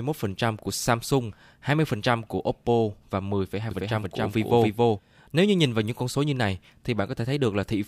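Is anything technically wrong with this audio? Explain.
Yes: from 3.71 to 4.99 s there's a doubled audio track, a second, equally loud copy trailing by around 300 ms, likely from an out-of-step edit.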